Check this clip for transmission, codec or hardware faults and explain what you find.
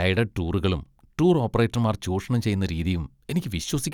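Nothing faulty turns up anywhere in this speech recording.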